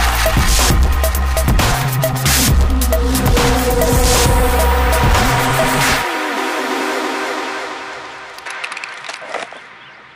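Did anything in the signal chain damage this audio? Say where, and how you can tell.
Yes. From 8.46 s to the end, the top end stops dead at about 11.4 kHz and the level shifts by roughly 5 dB, with a faint new noise floor well down underneath and no gap at the join. That points at the capture stage, likely an input switched to a poorer device mid-recording.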